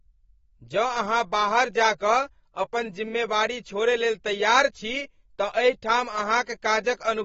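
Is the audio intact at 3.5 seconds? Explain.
No. At 3.5 seconds, as across the whole clip, the speech carries AAC compression damage, likely from AAC-LC at a low bitrate near 24 kbps. Nothing sounds above 7.6 kHz, and sibilants warble and fizz. A plain low-pass filter would dull the sound without that smeared, swirling texture.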